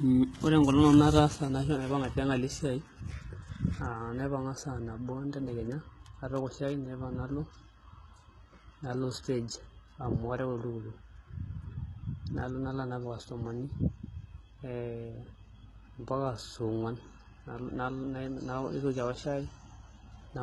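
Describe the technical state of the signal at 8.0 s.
At 8.0 s, as throughout, the sibilants sound gritty and lispy, with nothing above 11.8 kHz, likely from heavy HE-AAC compression whose replicated treble fits a bitrate near 16 kbps.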